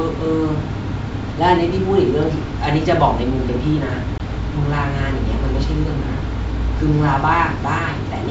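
A speech clip carried over wideband telephone coding, with a brief hole at 4.18 to 4.20 s: the sound drops abruptly to silence for 20 ms, and when it resumes it comes back with a touch of distortion before settling. This is packet loss on an ADPCM call, likely a single packet. The gap was filled with silence, and the receiver's adaptive predictor and step size lost track of the sender's, so the first few tens of milliseconds after the gap are decoded from mismatched state until the two realign. The G.722 coding carries the speech clearly up to about 7 kHz, with at most a faint hiss in the upper band.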